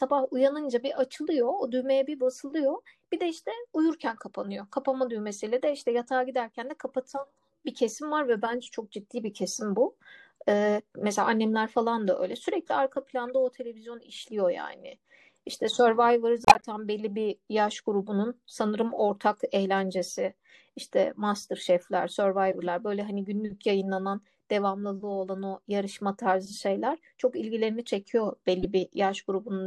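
At 8.64–8.70 s, 13.28 s, 16.45–16.65 s, 22.51–22.62 s and 28.61–28.65 s, the speech carries a corrupt frame decoded. In each case, a short run of compressed frames with flipped bits was played anyway, and the misread gains put energy at the wrong frequencies. Each event sounds like a chirp or noise blip. The burst near 16.5 s is the longest and loudest, peaking at about −5 dBFS. The one at 13.28 s is the quietest, around −40 dBFS. On a spectrogram, each appears as a brief vertical smear of misplaced energy.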